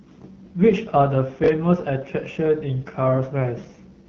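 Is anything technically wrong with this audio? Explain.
Yes. Throughout, the speech carries AMR wideband (HD Voice) codec damage. Content stops near 6.7 kHz, and the model-based coding is plainly rough and raspy, which fits one of the codec's lowest bitrates, such as 8.85 kbit/s.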